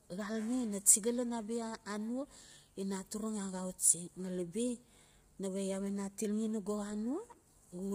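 A speech clip, with heavy coding damage from start to finish. The sound is rough and grainy, with noise filling the gaps between harmonics. Nothing reaches above 15.6 kHz. This is likely low-delay AAC compression (AAC-ELD), and the damage fits a bitrate near 24 kbps.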